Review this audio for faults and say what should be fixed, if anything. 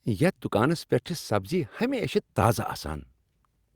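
Nothing in this speech recording needs fixing. No technical fault can be heard anywhere in it, so there is nothing to prevent.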